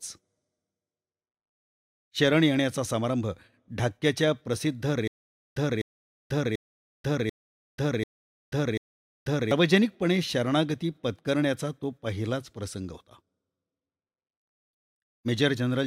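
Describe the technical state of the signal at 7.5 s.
At 7.5 s the signal is inside a stutter with silent gaps running from 5.08 to 9.51 s. A likely playback stall makes a 252 ms fragment of speech repeat six times, each followed by about 488 ms of digital silence, every 740 ms. The intervening audio is lost.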